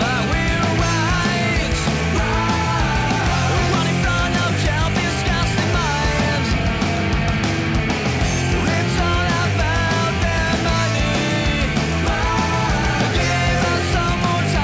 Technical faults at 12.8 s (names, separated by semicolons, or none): none